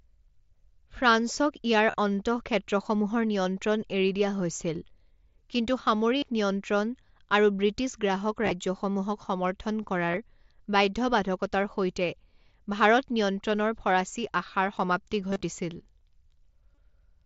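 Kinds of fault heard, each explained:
Concealed Bluetooth headset packet loss: Voice packets on the headset link went missing, and the receiver filled each gap by repeating the best-matching recent stretch of waveform. Eight such patches occur, most covering 15 to 45 ms. The worst comes just after "ফৰাচী আশাৰ সমাপ্তি" at 15.31 s, where about 82.5 ms is lost across 120 ms, giving a brief buzzy, held tone and a slight warble as real audio resumes.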